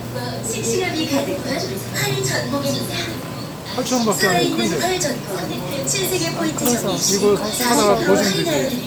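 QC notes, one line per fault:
No faults found.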